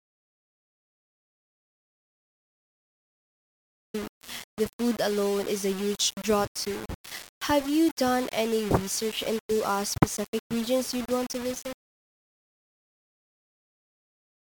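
The clip opens in complete silence, with no room tone at all, and the speech does not arrive until 3.94 s. The gap is already under way from the first instant. This is an audio dropout to silence, likely caused by the input being lost while the recorder kept writing silence.

Once the speech arrives, it is coarse and grainy for the rest of the clip. The grit rises and falls with the sound itself, and the quietest tails break up and sputter. The error sits only about 15 dB below the speech. This is low bit depth without dither, likely the result of rounding the signal to just a handful of steps, which fits roughly 5-bit quantisation.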